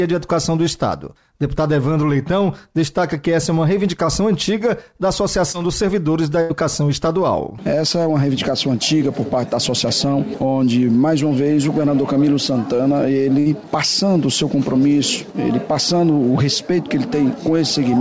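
A short concealed packet loss at 5.52 to 5.56 s leaves a brief smear in the sound. About 20 ms of the call arrived too late to decode, and the receiver bridged it by extending the preceding sound before blending back into the real signal.

A burst of packet loss hits at 6.42 to 6.52 s and again at 13.40 to 13.48 s, with roughly 80 ms and 60 ms missing. Each time the receiver stretches the last sound and turns it down as the gap goes on. Playback then picks up further along, with that stretch of audio lost. The call path itself, with nothing audible above 8 kHz, fits a G.722 codec at 64 kbps.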